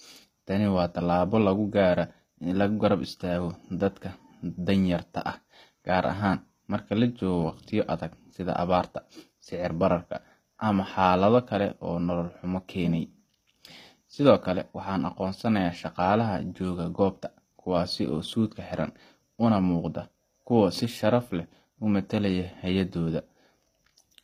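Throughout the speech, the treble sounds plainly synthetic, with gritty, metallic s sounds. The likely cause is HE-AAC compression at a bitrate near 24 kbps, which rebuilds the highs from copied lower bands. A spectrogram shows coarse, misaligned upper harmonics and nothing above 15.5 kHz.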